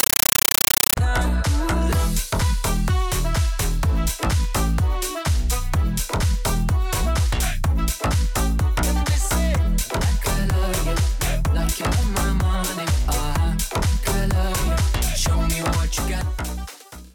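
An AC-3 (Dolby Digital) bitstream was passed to the output as if it were ordinary PCM samples, so the compressed stream was played as audio instead of being decoded. From 0.0 to 0.97 s the sound is replaced by harsh, very loud chattering static: bursts of noise about 9.3 ms long, each followed by silence, repeating 31.25 times a second. The density of each burst fits a 448 kbps stream.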